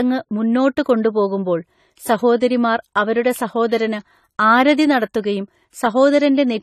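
From start to finish the speech has nothing above about 13.9 kHz, a hard shelf where the top octave simply stops, and the highs carry that thin, swirly quality of a starved encoder. This is likely low-bitrate audio saved at a high bitrate: the sound points to a low-rate AAC pass that stripped the detail, with a later high-rate MP3 encode just preserving the damage. The extra bits can't bring back what the first codec threw away.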